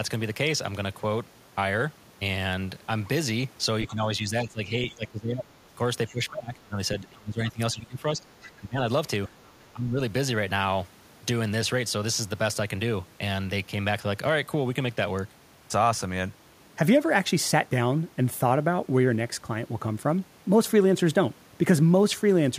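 A speech clip where the talker's voice repeatedly sinks, by roughly 15 to 20 dB, at 3.88–5.71 s, 6.09–6.8 s, 7.01–8.81 s and 9.73–10.0 s, likely speech suppressed in double talk as the echo canceller turned down both sides. A faint scrap of the other side's voice leaking through appears at 9.46–9.64 s, very far below the speech, likely loudspeaker echo the canceller failed to remove.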